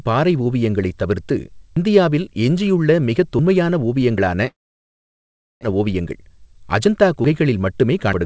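At 1.77 s, right after "பாறை ஓவியங்களைத் தவிர்த்து", the speech jumps ahead by roughly 150 ms, most likely a dropped buffer (overrun): samples were overwritten before being read, and the two edges were spliced together. A waveform shows an abrupt discontinuity with no gap, and a spectrogram shows a thin vertical broadband line.

A smaller skip of about 50 ms at 4.18 s has the same character.

From 4.48 s to 5.65 s comes a long network dropout, likely from packets that never arrived. The last sound is stretched into a fading buzz, and then about 1.1 s of near-silence follows. When the speech resumes, about a second of it is missing. On a spectrogram, smeared harmonic bands fade into an empty stretch.

From 5.72 s to 6.88 s, a jitter buffer speed-up plays the speech at about 111% of normal speed with unchanged pitch. Roughly 150 ms is trimmed away in many tiny pitch-period cuts, so the speech sounds hurried. 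Formant tracks look compressed in time, but their spacing stays level.

At 7.25 s, another likely dropped buffer of about 50 ms produces a jump. Across the whole clip, the G.722 call path leaves nothing above 8 kHz.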